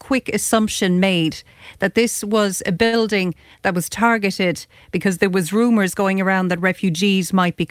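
At 2.85 to 2.94 s, right after "that this was a", a short stall from a late packet holds the sound about 70 ms too long with a faint buzz or dip. The spectrogram shows a smeared, flat stretch; the waveform repeats cycles. Nothing is lost, but everything after runs 70 ms late.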